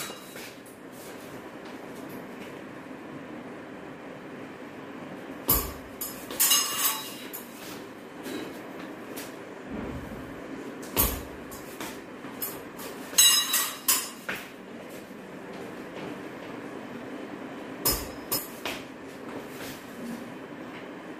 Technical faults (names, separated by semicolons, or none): doubled audio track